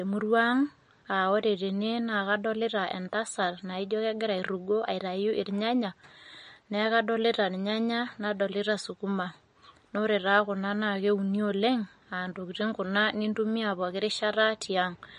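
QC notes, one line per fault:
Throughout: MP3 compression, likely behind the plainly audible watery, swirly texture on the speech. Nothing sits above 10.6 kHz, a hard flat ceiling on the spectrogram, and weak bands flicker between frames as speckled gaps, which fits a bitrate around 40 kbps.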